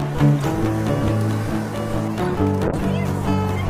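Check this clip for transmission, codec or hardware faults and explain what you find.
There's one fault here, a call bitrate drop. From 2.68 s to the end, the sound turns rough and muffled as the encoder suddenly has far fewer bits to spend, which fits a fall from around 96 kbps to roughly 18 kbps.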